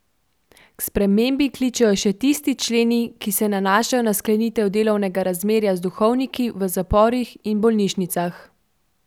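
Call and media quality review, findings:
No audible faults found in the speech; nothing to escalate.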